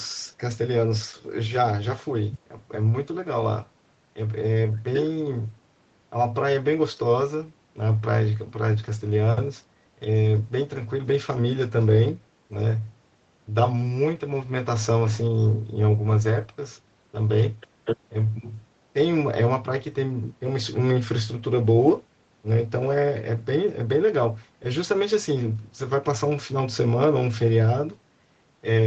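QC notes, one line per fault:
No faults heard.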